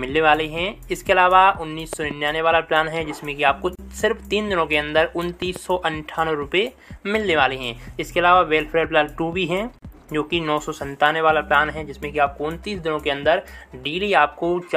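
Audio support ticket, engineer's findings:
Loud pop at 1.93 to 2.13 s and again at 5.42 to 5.58 s. Each event is a pair of sharp pops in quick succession, a few dB above the sound, which carries on underneath. Likely cause is an electrical step at a plug, switch or driver, shaped into a pulse by the following circuits. Check connectors and interface driver.

Gap at a join of encoded pieces at 3.75 to 3.79 s (34 ms) and 9.79 to 9.82 s (37 ms). Abrupt silent dropout, edges smeared, then sound resumes where it stopped. The gaps recur every 6 s, which points to 6 s segments encoded separately. Encoder start delay and last-frame padding are left in at each join. Fix by trimming priming and padding at concatenation.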